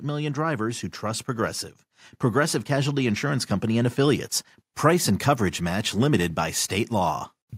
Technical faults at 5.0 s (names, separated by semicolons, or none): none